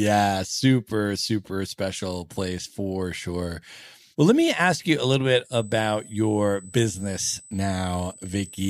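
From 5.53 s, right after "you a little bit", a thin, steady, high-pitched tone sits under the speech until the end at 8.69 s. This is USB whine. It holds at a fixed 8 kHz, with its energy strongest there. That pitch matches the 125-microsecond microframe rhythm of a USB bus. Its current pulses leak into the audio through shared power or ground. The whine sits roughly 20 dB below the speech.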